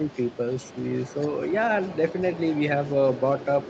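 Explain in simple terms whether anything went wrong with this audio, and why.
In the first 0.18 s the speech dips slightly, for only a fraction of a second in total. This is speech suppressed in double talk, likely because both sides spoke at once and the echo canceller turned the talker down along with the echo.

From 0.03 s right to the end, a faint second voice sits well beneath the talker. This is the other side's voice leaking through, likely because the talker's loudspeaker was picked up by the microphone and the echo canceller did not remove all of it.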